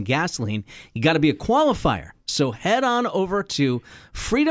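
No technical faults can be heard anywhere in the speech.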